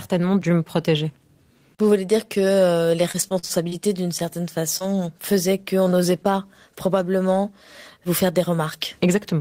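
Repeated packet loss (robotic sound) runs from 3.11 to 3.74 s, right after "voulez dire que les". Over that stretch the audio drops out in five separate holes, the longest about 48 ms. The receiver covered about 162 ms by stretching the preceding sound forward, roughly a quarter of the span, while about 60 ms is simply missing. The rapid alternation of patched and absent audio gives the passage a choppy texture with chunks torn out.

Short concealed packet loss occurs at 4.79 to 4.82 s, just before "faisaient qu'on n'osait pas". A few hundredths of a second arrived too late for decoding. About 17 ms were bridged by extrapolating the last sound, either from its pitch or as shaped noise, before blending back into the real signal, and about 20 ms are lost outright. The result is a brief smear or wobble at that point.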